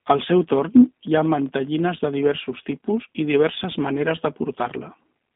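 Throughout, the speech carries G.729 codec coloration: a rough, slightly synthetic buzz from rebuilding each frame with a filter, pitch predictor and few pulses, consistent with 8 kbit/s. A spectrogram shows energy confined to 200 Hz–3.7 kHz, blank above.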